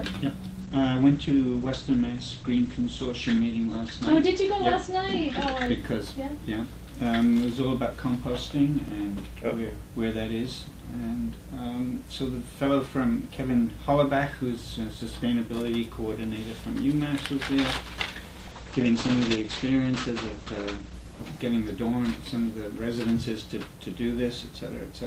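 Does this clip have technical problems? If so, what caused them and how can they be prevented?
Yes. There are two kinds of fault.

The first is a call bitrate drop, at 0.63 to 5.83 s and again at 18.41 to 22.77 s. Each time the bandwidth estimate collapsed and the encoder fell from 40 to 11 kbps. It sat at the lowest rate for about 3.6 s the first time and about 2 s the second, coding more coarsely and narrowing the band from 20 kHz to 8 kHz, so the audio turns rough and muffled before recovering. On a spectrogram, everything above 8 kHz vanishes under a flat ceiling for those spans. Prevent it by keeping the network path uncongested, with enough headroom that the bandwidth estimate never needs to fall so far.

The second is a block of digital silence, at 5.66 s (2 ms) and 8.88 s (1.33 ms, which fits a 64-sample block). The output buffer was not filled in time, or a calculation produced invalid values, so zeros played in place of the audio. 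Both gaps are far under 15 ms, so they are heard as ticks or dips and not as holes. On the waveform each shows as a tiny flat segment with abrupt edges, and on a spectrogram as a thin vertical line. Prevent it with a larger output buffer and real-time scheduling priority for the audio thread.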